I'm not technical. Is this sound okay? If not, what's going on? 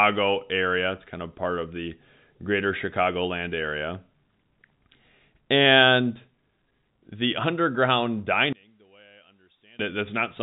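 No. One channel inverted, from 8.53 to 9.79 s, right after "the underground", makes the speech almost disappear, dropping to a faint trace before returning. The likely cause is that one side of the stereo signal has been flipped upside down. When both sides are mixed into one, as a phone or single speaker does, each side cancels the other, and a centred voice like this one nearly vanishes.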